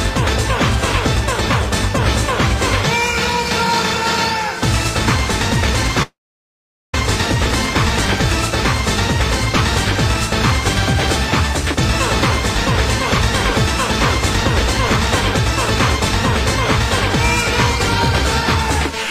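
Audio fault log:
6.02–6.94 s, long network dropout: the sound breaks off and about 0.91 s of audio never plays; the gap is filled rather than skipped, so the clip resumes with that stretch missing. The first tenth of a second or so carries the final sound on as a brief, fading buzz, and the remaining 0.81 s is silence. This is likely a stall in packet delivery, with the receiver's concealment extrapolating briefly before muting until data returns.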